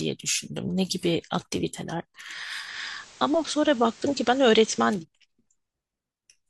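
At 2.59 s the receiver loses its digital signal, digital radio blending to analogue FM over a 159 ms cross-fade, and returns at 5.05 s. In between, the speech drops about 1 dB and carries a hiss roughly 25 dB down.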